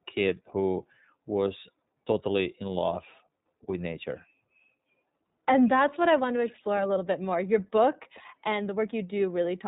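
iLBC codec damage runs through the whole of this speech clip, from start to finish. Nothing above 4 kHz survives, and each short frame's excitation is coded on its own, which fits iLBC's 20 ms, 15.2 kbps mode. The result is a plainly rough, slightly synthetic narrowband sound.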